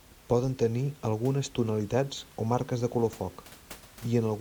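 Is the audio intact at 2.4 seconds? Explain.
Yes, the speech at 2.4 seconds is intact, with only the room's own background noise sitting about 25 dB below it.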